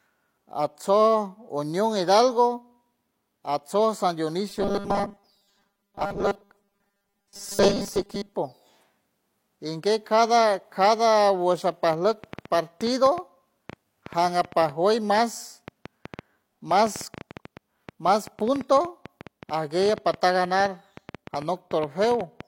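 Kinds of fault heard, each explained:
Robotic sound from repeated short buffers: from 4.50 to 8.35 s a rigid 200 Hz buzz that follows the speech only roughly, likely from a 5 ms buffer being repeated, with most of the real audio skipped.
Train of clicks: from 11.93 s to the end, about 70 similar clicks at an uneven pace of about 6.7 per second, around 5 dB above the speech, likely from interference or a faulty connection.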